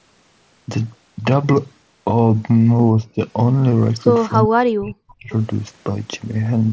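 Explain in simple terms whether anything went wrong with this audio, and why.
Yes, the speech drops away twice. Around 2.99 to 3.19 s it dips slightly for a moment, and from 4.47 to 5.31 s it sinks almost to silence for most of that stretch. This is likely speech suppressed in double talk: both ends of the call were talking at once, and the echo canceller, unable to tell this talker apart from the returning loudspeaker sound, turned everything down together.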